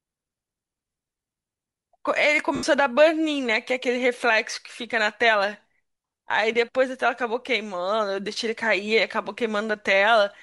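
The whole speech clip carries a breathy, grainy edge on the upper frequencies. The likely cause is Bluetooth LC3 compression, which thins the top of the spectrum and fills it with noise. The damage is plainly audible and fits roughly 48 kbps with 10 ms frames.

Lost LE Audio frames break the sound three times: from 0.91 to 0.96 s (50 ms), from 2.55 to 2.63 s (80 ms), and at 4.52 s (10 ms). The decoder repeats the last spectrum with scrambled signs. Each gap becomes a brief noisy smear instead of clean speech.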